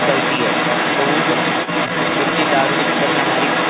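The echo canceller likely failed to strip the far end's loudspeaker sound out of the microphone feed, so the other side's voice leaking through runs for the whole clip, from the first moment to the last. That second voice sits at roughly the same level as the main talker, so the two compete throughout. Both are band-limited to about 4 kHz, as expected for a narrowband G.711 mu-law call path.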